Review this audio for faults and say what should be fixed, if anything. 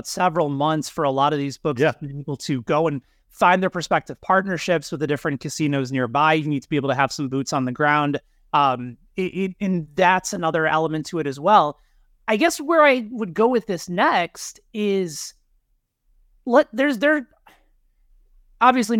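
Nothing stood out on listening to the speech, so there is nothing here to fix.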